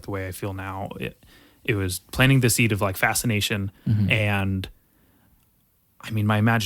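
A short stutter breaks the speech at 4.18 to 4.21 s: a 20 ms slice of sound plays, then plays again immediately. This is repeated frames. A block of compressed audio was written or sent twice, which fits a pair of short codec frames, so the decoder played the same 20 ms a second time. The duplicate adds 20 ms to the clip's running time.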